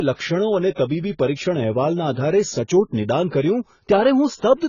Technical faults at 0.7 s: AAC compression; pre-echo

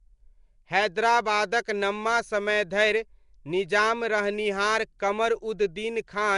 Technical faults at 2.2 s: Nellymoser compression

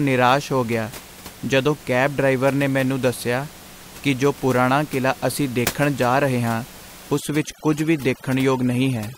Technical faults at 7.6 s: overdone noise removal

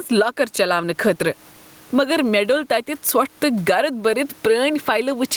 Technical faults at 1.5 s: gain pumping

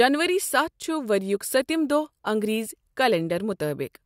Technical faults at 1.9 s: none

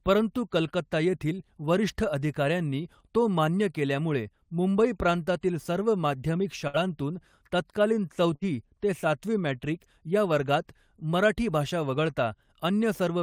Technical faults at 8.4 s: burst of packet loss

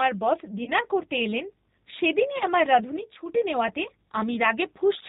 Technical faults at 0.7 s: G.729 codec; VoIP packet loss concealed by the speech codec

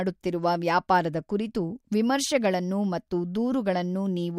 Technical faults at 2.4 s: none

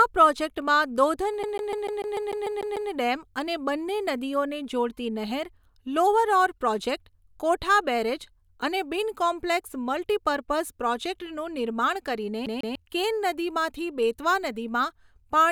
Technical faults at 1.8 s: CD stuck on one turn

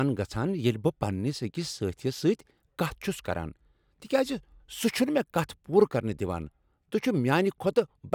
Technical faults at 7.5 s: none

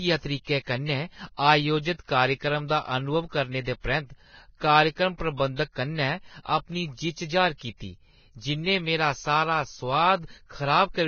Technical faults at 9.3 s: Vorbis compression

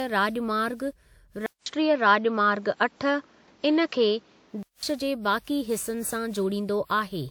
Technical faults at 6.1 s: generation loss

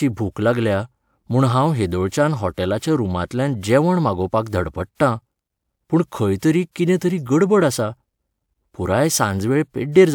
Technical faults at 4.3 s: none

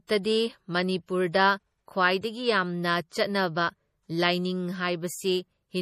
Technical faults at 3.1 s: MP3 compression; pre-echo

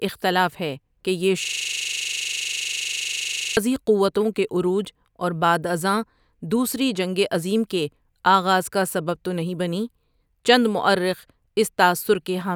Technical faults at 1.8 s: system hang loop

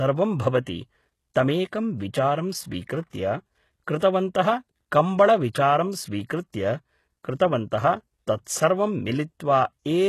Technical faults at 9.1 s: HE-AAC compression

